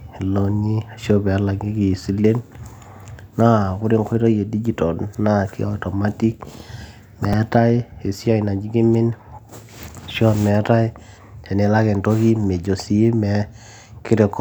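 A speech clip with a repeated buffer at 7.33 s: the same tiny slice of audio plays three times in a row, heard as a brief click or buzz, which fits a 5 ms buffer being replayed when fresh audio arrived late. On a waveform, identical short cycles sit side by side with abrupt jumps at each join. On a spectrogram, thin vertical lines mark the joins, with a comb of harmonics spaced about 200 Hz apart.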